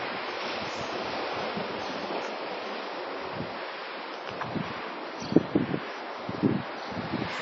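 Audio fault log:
Throughout: WMA compression. Ringing, washy sound with hiss that breathes along with it, and nothing above 7.6 kHz. The cause is likely a low bitrate near 32 kbps.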